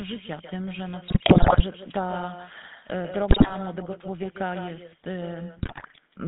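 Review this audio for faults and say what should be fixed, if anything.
Echo with no canceller, throughout the clip: every phrase is followed about 10 dB down by a thinner copy arriving roughly 150 ms later. The far end is playing the call through a loudspeaker, and its microphone picks that up and sends it back over the network, so the talker's own sound returns after the round trip. Nothing at either end subtracts it. Enabling acoustic echo cancellation on the far-end device, or having that side use a headset, would prevent it.

GSM full-rate codec, throughout: the audio has the buzzy, gravelly roughness of this coder, and the damage is plainly audible. The band runs from 150 Hz to 3.7 kHz, and the character fits 13 kbit/s GSM full rate. That coder models the vocal tract and excites it with a sparse, regularly spaced pulse train, so fine detail in the excitation is discarded and comes back as grit. 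Routing the call over a wideband codec such as AMR-WB or a VoIP path would avoid it.

GSM bit errors, at 1.08 to 1.63 s, 3.30 to 3.56 s and 5.58 to 5.96 s: the sound breaks into squawks, pops and gargling. Corrupted bits from a weak radio link are reaching the decoder, where damaged filter, pitch and gain values bend the spectrum or spike the level frame by frame. The middle burst has the densest errors. A stronger signal, or a link with better error protection and bad-frame concealment, would prevent these bursts.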